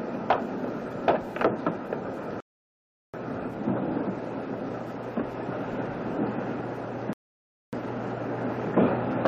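At 2.40 s the audio drops to silence until 3.14 s, then resumes exactly where it halted: a rebuffering stall, the player having exhausted its downloaded data. A second stall follows at 7.13 to 7.73 s. Nothing is skipped; the gaps add about 0.73 s and 0.60 s.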